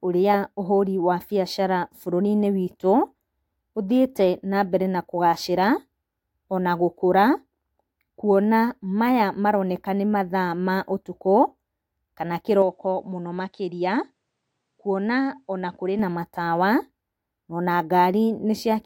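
From 12.62 s to 15.99 s the speech turns duller and a little quieter, with nothing above 10 kHz and faint new background noise, then clears again with no gap at either change. The likely cause is an input switched to a poorer device.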